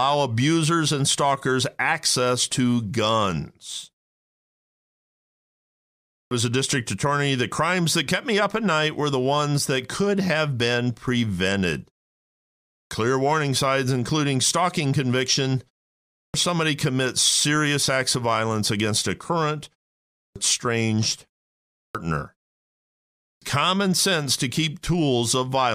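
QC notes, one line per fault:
6.07, 12.66, 16.08, 20.11, 21.72 and 23.18 s: clipped start after a pause. After each silence of about 0.4 to 2.2 s, the first 230 to 260 ms of speech is missing as the output wakes, as just before "warning signs including stalking". Unlike muted pauses, speech itself is lost.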